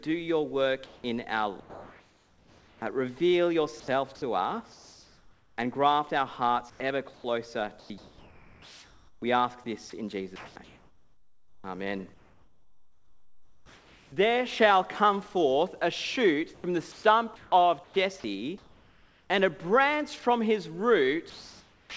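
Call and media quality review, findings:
Sound dropped by the voice detector, 0.86–1.04 s and 21.30 s to end: sender VAD likely misread active sound as background and stopped sending. About 120 ms and 360 ms of sound lost, replaced by steady comfort noise (180 ms, 670 ms).

Comfort noise in place of the background, 0.86–2.82 s: DTX pause, likely sender-side, with receiver filling about 1.4 s with synthetic noise. Real background detail gone, replaced by flat, featureless hiss until sound resumes.

Sound chopped by the voice detector, 3.80–5.58 s, 6.70–14.12 s, 16.54–19.30 s: VAD likely toggling send/no-send repeatedly. Edges and quiet stretches swapped for comfort noise, about 1.0 s, 4.7 s and 1.3 s in total. Choppy. Band-limited to 8 kHz throughout, which fits G.722 at 64 kbps.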